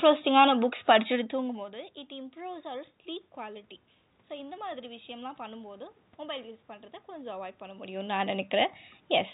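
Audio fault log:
Nothing stood out on listening to this recording.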